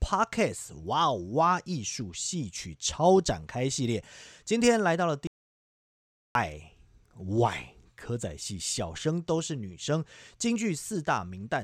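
At 5.27 s the speech cuts out mid-flow into dead silence, with no room tone at all, until it comes back at 6.35 s. That's an audio dropout to silence, about 1.1 s lost, likely from the input disconnecting while recording carried on writing silence.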